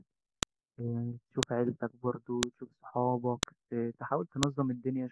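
A file header played as audio gives sharp clicks at 0.43, 1.43, 2.43, 3.43 and 4.43 s, one per 1-second piece. Each appears as a spike on the waveform and a thin vertical broadband line on the spectrogram.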